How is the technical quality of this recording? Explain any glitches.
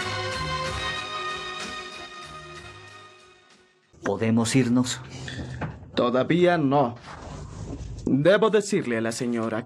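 Nothing here sounds like a glitch; the recording holds together nicely with no dropouts, clicks or other hiccups to point to.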